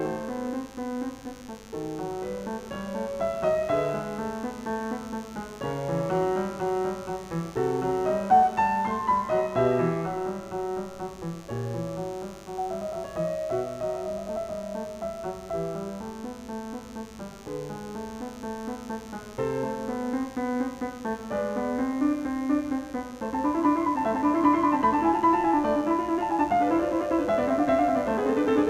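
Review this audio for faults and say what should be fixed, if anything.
There's a mains buzz running under the music for the whole clip, a steady raspy edge built on 50 Hz harmonics that climb into the low kHz. It sits roughly 25 dB below the music, from switching spikes twice per cycle. Keep dimmers off that circuit and check shielding and grounding.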